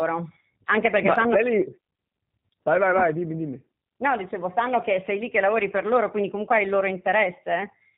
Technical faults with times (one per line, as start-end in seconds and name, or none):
0.00-7.97 G.729 codec